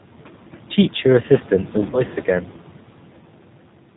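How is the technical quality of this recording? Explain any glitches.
The recording is intelligible but clearly degraded, with codec coloration throughout, noise-suppressor side effects, and one brief dropout around the two-second mark.

The G.729 codec shapes the whole clip. It rebuilds speech from a vocal-tract filter, a pitch predictor and a few pulses per frame, so the speech sounds rough and slightly synthetic. On a spectrogram, energy stops sharply at 4 kHz, and the harmonics look smeared and grainy. The damage is plainly audible and fits an 8 kbit/s stream.

Noise suppressor artifacts run throughout. The background drops by about 12 dB in the gaps and returns under the speech, because the suppressor lowers noise-dominated bands frame by frame. A spectrogram shows a patchy, blotchy noise floor that switches on and off with the speech. The room noise itself sits about 18 dB below the speech.

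VoIP packet loss concealed by the speech codec occurs from 1.90 to 2.03 s. About 30 ms of audio went missing, which fits three 10 ms frames. The decoder extrapolated from its last pitch and filter state, so the sound stretches and fades, and stays weak briefly after the data returns. The waveform shows a decaying stretch.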